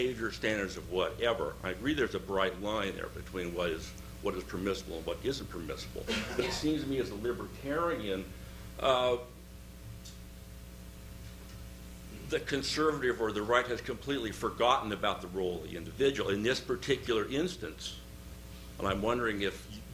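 Nothing here calls for comment; the audio runs its whole course without a single technical fault to point out.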